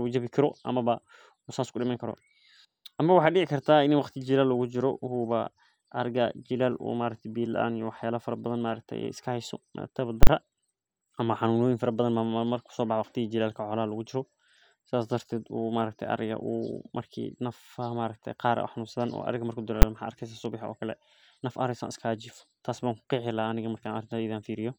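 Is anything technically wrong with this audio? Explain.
Yes. The speech has two loud clicks caused by invalid numbers at full scale. The first runs from 10.23 to 10.27 s and lasts 40 ms. The second is at 19.82 s and lasts 10 ms. In each, a calculation gave infinite or invalid results, and the output was forced to the largest positive or negative value for that whole block. The speech drops out and the signal is pinned at one extreme. The jumps in and out make a harsh pop at 10.23 s and again at 10.27 s, and a single sharp bang at 19.82 s.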